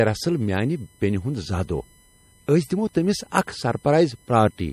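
Throughout the clip, USB bus current leaks into the audio path as USB whine: a steady 1 kHz tone whose harmonics peak around 10 kHz, about 35 dB below the speech. The speech also shows likely MP3 compression, at a rate that fits roughly 40 kbps, with nothing above 13.1 kHz and a plainly audible watery, swirling texture.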